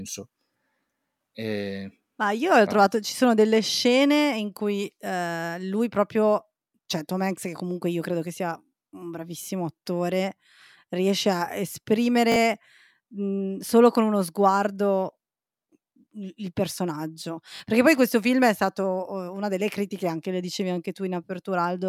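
At 12.32 s and again at 17.56 s, fresh audio arrived late, so the device replayed its last 20 ms buffer twice more. This repeated buffer makes a brief buzzing stutter in the speech, with roughly 40 ms lost each time.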